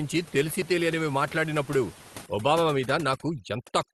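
Overdone noise removal sets in at 2.26 s and runs to the end of this speech clip: an over-aggressive noise reducer gates bands near its noise estimate, taking quiet parts of the speech with them and leaving a near-silent, twinkling background.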